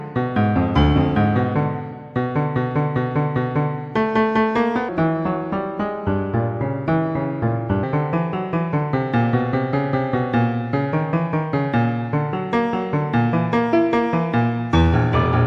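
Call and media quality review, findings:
Section at the wrong speed, 4.89 to 7.83 s. Audio runs at 0.737x, dropping about five semitones, with speed and pitch falling together. Likely a clock or sample-rate mismatch in the editing or playback stage, stretching this span against the wrong rate.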